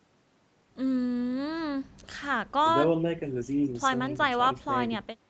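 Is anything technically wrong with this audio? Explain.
No, nothing stood out as a technical problem on listening.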